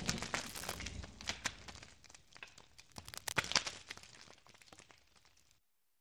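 At 0.46 to 0.79 s, and again from 2.92 to 3.71 s, bursts of cable scratch noise sit over the audio: dense, irregular crackling and rustling, only slightly quieter than the sound itself. The likely cause is a worn cable, connector or control being moved, so its contact resistance jumps about rapidly and injects uneven noise into the signal. The second burst lasts roughly two and a half times as long as the first.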